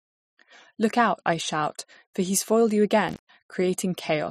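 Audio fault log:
3.09 to 3.29 s: intermittent contact. Just after "for he's foiled you", the speech drops out abruptly, with a crackle as the signal leaves and again as it returns. The open stretch lasts about 130 ms. In that gap faint hiss remains. This is the sound of a loose plug or cable losing its connection for an instant. The crackle comes from the contact scraping as it breaks and remakes, and the hiss is whatever noise the open line still picks up.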